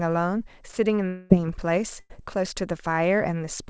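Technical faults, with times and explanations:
1.08–1.32 s, long network dropout: for about 0.22 s the last sound is drawn out as a fading buzz or hiss that never drops to silence, then speech resumes with that stretch gone. Its length, twice the later gap, points to a likely dropout in the network.
2.00–2.12 s, burst of packet loss: about 0.1 s of speech is missing, bridged by the preceding sound held and turned down as a brief buzz or hiss before speech picks up further on. It is half as long as the earlier gap.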